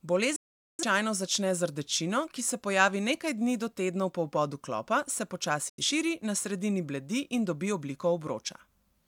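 At 0.36 to 0.83 s, before "začne z rdečino ki", and again at 5.69 to 5.83 s, after "po vbodu klopa se", a digital broadcast dropout mutes the speech. Failed frames make the receiver fade to silence in about 3 ms, with no concealment noise, and the speech resumes with that stretch lost rather than delayed.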